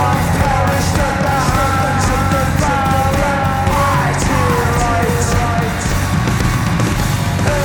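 The audio has a doubled audio track running the whole way through: a second full-band copy trails about 0.7 s behind, only a few dB quieter, with no decay or room colour. It's likely a slower capture path recording everything a second time.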